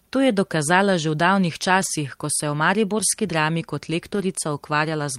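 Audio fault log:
1.81–1.87 s and 4.15–4.21 s, lost packet rebuilt from error correction. The first falls between "dokazala že v davnih" and "ko se je v". Each time, about 40 ms of speech turns briefly rough and grainy, with no silence. Missing audio was replaced by a low-bitrate backup copy carried in the following packet. That coarser copy fills the hole, so the flow continues but loses detail. The length fits two lost packets.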